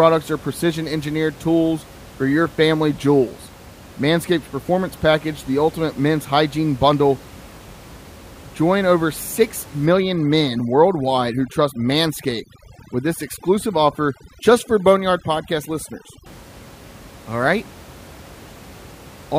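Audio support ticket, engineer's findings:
Overdone noise removal, 9.86–16.26 s. Background drops and breaks up into twinkly specks. NR set too aggressive: bands near the noise estimate get gated out, quiet speech detail with them. Room noise sits about 22 dB under speech.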